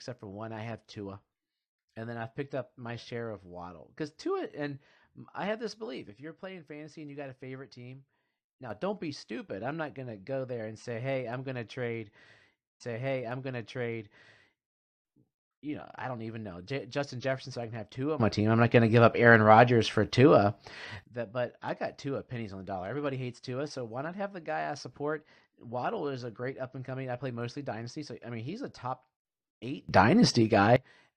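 From 6.10 to 8.70 s a sudden gain jump drops the speech and background noise together by about 6 dB, likely an unramped digital gain change; the waveform envelope steps down abruptly. At 12.80 s a stream segment repeated sends playback back, replaying about 2 s of audio until 14.78 s, with a small blip and a visibly duplicated spectrogram pattern. Further gain jumps raise the level by about 15 dB from 18.20 to 21.04 s and about 18 dB from 29.89 to 30.76 s, each a sharp step in the waveform.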